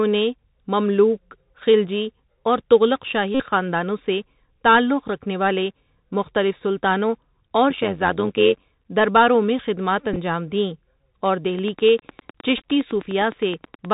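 Throughout, the speech passes through the Bluetooth CVSD headset codec, a one-bit delta coder running at 64 kHz with an adaptive step. Nothing above 4 kHz survives, sibilants turn scratchy, and a granular hiss sits under everything.

From 3.35 to 3.45 s, between "مملوک خلجی اور تغلق" and "خاندانوں سے تعلق رکھنے", lost packets were replaced by repeats of the last one (a Bluetooth headset packet repeated fault), covering about 52 ms, which produces a brief steady buzz near 267 Hz.

From 7.70 to 8.65 s, between "والے مختلف سلطانوں اور" and "درباروں میں خدمات", frames were overlap-added with windows that don't sum to constant gain. This overlap-add ripple makes the level pulse by about 11 dB at around 100 Hz, a metallic buzz with extra tones around each note.

From 10.13 to 10.17 s, more packets were repeated, scattered in short runs totalling about 11 ms, heard as small ticks.

From 11.59 to 13.86 s, after "دیں اور", a train of clicks appears: about twenty similar pulses at a regular 9.7 per second, peaking roughly 10 dB above the speech and likely caused by interference or a faulty connection. 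Within that stretch, from 12.57 to 12.65 s, repeated packets totalling about 19 ms add further brief ticking.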